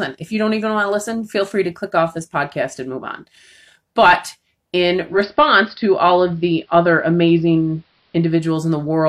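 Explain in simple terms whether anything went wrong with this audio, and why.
Yes: at 4.96 s the radio lost its digital signal and, through digital radio blending to analogue, slid over about a quarter-second to the station's AM broadcast, returning at 8.57 s. Meanwhile the sound turns duller, and faint hiss creeps in, though loudness holds steady.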